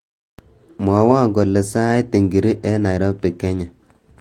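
No technical faults can be heard anywhere in the recording, and the signal holds steady throughout.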